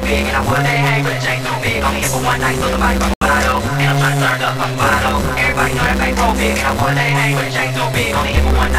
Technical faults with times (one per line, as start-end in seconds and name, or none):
0.00-8.79 channel delay (doubling)
0.00-8.79 block size mismatch (truncated)
3.14-3.21 digital broadcast dropout